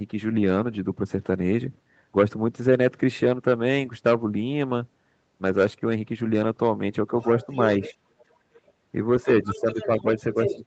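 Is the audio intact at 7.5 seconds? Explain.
No. From 7.21 to 8.72 s a second, faint voice sits under the speech at roughly 20 dB below it. This is the other side's voice leaking through, most likely because the loudspeaker playback reached the microphone and the echo canceller left part of it in. Between 7.46 and 7.52 s the talker's speech also dips briefly by a few decibels. This is speech suppressed in double talk, with both sides talking at once; the canceller likely could not separate the talker from that echo and turned both down.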